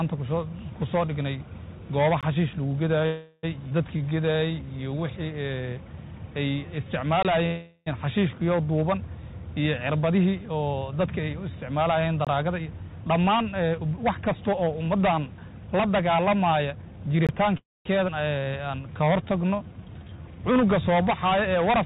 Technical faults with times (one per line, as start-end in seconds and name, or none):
2.21-2.23 gap between chunks
3.06-3.45 call audio freeze
3.69-3.72 skip ahead
3.97-5.00 jitter buffer slow-down
7.23-7.25 gap between chunks
7.46-7.88 call audio freeze
10.10-17.57 jitter buffer speed-up
12.25 gap between chunks
17.27 gap between chunks
17.57-17.87 call audio freeze
18.07-18.10 skip ahead
18.39-20.23 jitter buffer slow-down